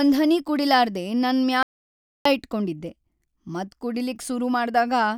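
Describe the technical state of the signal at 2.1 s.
At 2.1 s the signal sits inside an audio dropout to silence. It runs from 1.63 s to 2.25 s, about 0.63 s in all. The speech stops mid-flow and returns just as abruptly. The gap is silent, with no room tone or hiss beneath it. The input was likely lost for that moment, through a disconnected device, a failed link or a stray mute, while recording carried on writing silence. Whatever was said there is gone.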